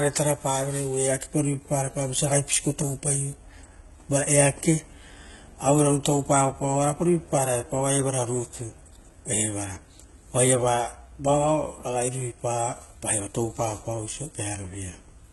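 The speech has most likely been passed through HE-AAC compression at a very low data rate, one that fits a bitrate near 16 kbps. From start to finish, only the lower spectrum sounds genuinely coded. The treble above it has been rebuilt by copying lower bands upward, so its harmonics fail to line up with the real ones. Nothing comes through above 11.8 kHz, and the damage is heavy: s sounds come out gritty, metallic and lispy.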